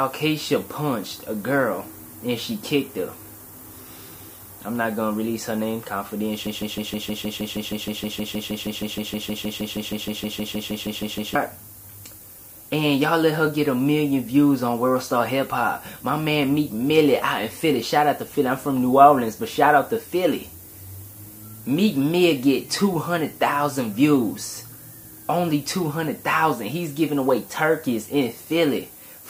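Low bit depth with noise shaping runs throughout. The sound is held to about 8 bits and the rounding error is pushed upward, leaving a thin hiss, loud against the signal, climbing toward the top. Broken-record loop from 6.47 to 11.35 s: a 0.16 s fragment repeats 31 times back to back, likely a stalled player or stream resending its last buffer, and the intended audio is lost.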